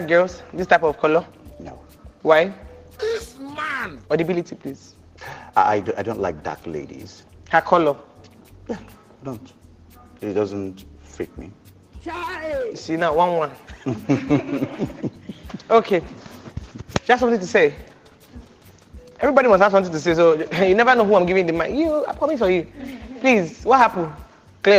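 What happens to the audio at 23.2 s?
Nothing goes wrong at 23.2 s; the audio plays through that moment intact, with no dropout, glitch or other fault.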